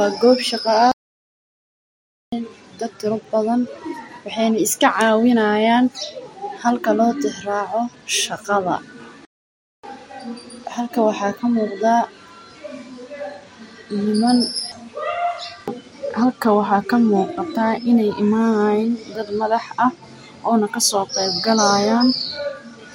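A playback stall hits at 0.92 s and again at 9.25 s: the speech cuts to silence mid-flow for about 1.4 s, then 0.58 s, before resuming. The likely cause is the player running short of data or its thread being blocked, leaving the output empty.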